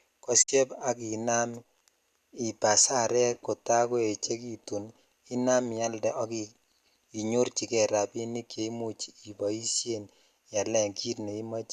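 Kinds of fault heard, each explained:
Digital broadcast dropout: the receiver lost frames and muted, so the speech fades out over 20 ms at 0.41 s and returns at 0.50 s, losing 48 ms, which fits two dropped frames. The waveform shows a ramp to flatline; the spectrogram, a blank vertical strip.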